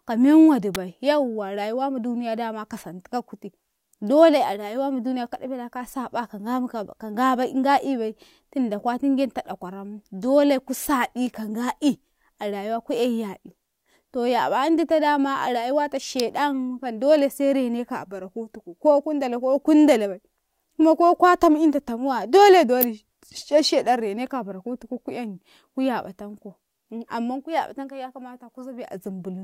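A sharp spike cuts across the speech at 0.75 s. It peaks at about -5 dBFS. A second, quieter spike comes at 16.20 s, at about -10 dBFS. The last runs from 22.81 to 22.84 s. It is a short burst, the loudest of the three. Each is an electrical switching spike. The likely cause is a nearby switch or motor arcing. The line picks up the burst, which lands on top of the voice.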